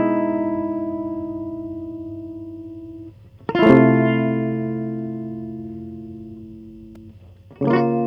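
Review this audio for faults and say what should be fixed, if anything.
A gain stage was pushed about 4 dB past its ceiling from 3.63 to 3.77 s, so the music's peaks were sheared flat, causing hard clipping that adds a brief crackling edge. Lowering the gain ahead of that stage, or adding headroom, prevents it.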